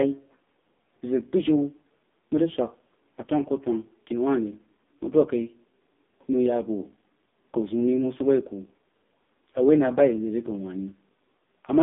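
AMR narrowband mobile codec damage runs from start to finish. The speech has passed through a 2G/3G-style coder that samples at 8 kHz and rebuilds the voice from a vocal-tract model excited by a few pulses per 5 ms subframe. Only roughly 200 Hz to 3.7 kHz survives, with nothing above 3.8 kHz. The heavy buzzy, synthetic quality points to one of the lowest modes, around 5.15 kbps.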